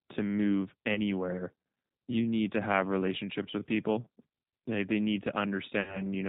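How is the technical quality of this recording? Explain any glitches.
The quality is limited by the G.729 speech codec throughout, with two short dropouts concealed by the decoder.

G.729 codec, across the whole clip: the sound points to an 8 kbit/s rate, which fits G.729A. The decoder rebuilds each 10 ms frame from a vocal tract filter, a pitch predictor and a handful of pulses, discarding everything above 4 kHz. The speech stays intelligible but is plainly muffled and slightly rough and synthetic, lacking natural breathiness and sibilance.

VoIP packet loss concealed by the speech codec, at 0.94 to 1.00 s just after "to move" and at 5.81 to 6.02 s just after "they need": in each case packets went missing, about 20 ms of audio the first time (the sound points to a single lost packet) and about 60 ms the second (consistent with three in a row). The decoder filled each gap by extending its last pitch and filter settings at falling gain, so the speech smears into a buzzy tone or a coloured noise that fades. 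The second lasts roughly 0.2 s, because each frame builds on the previous one, so the voice stays weak and distorted for a while after the packets return.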